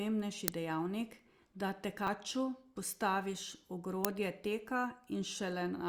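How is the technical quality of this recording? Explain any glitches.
The recording is marred by three glitches: two brief digital bursts and one stretch of crackle.

At 0.48 s and again at 4.05 s there is an uninitialised buffer. Each time, the playback system sent out a block of memory before any audio had been written into it, so whatever leftover data sat there was played as samples. The result is a very short, loud snap of digital noise, about 1.33 ms long, which fits a 64-sample block.

From 1.97 s to 2.08 s there is processor overload crackle. The processor couldn't finish its small audio buffers in time, roughly 10 ms each, and missed about seven deadlines. Each missed buffer was skipped outright, leaving a small hole with abrupt edges. Strung together, those holes sound like a gritty, tearing crackle laid over the speech, which clears once the load drops.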